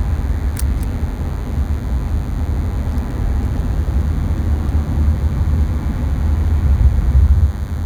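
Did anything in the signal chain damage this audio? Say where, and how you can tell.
Yes. A DECT cordless phone buzz enters the analogue wiring for the whole clip. It is a thin, steady 100 Hz rasp, roughly 25 dB below the sound, from rectified 10 ms radio bursts. It is buzzier than mains hum.

Hard clipping at a converter or gain stage from 6.81 to 7.32 s flattens peaks overdriven by about 1 dB. It is heard as brief crackle on the loudest moments, not as codec smearing.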